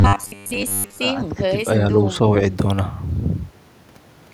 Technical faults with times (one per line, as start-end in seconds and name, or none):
0.01-1.00 robotic sound from repeated short buffers
1.16-1.54 speech suppressed in double talk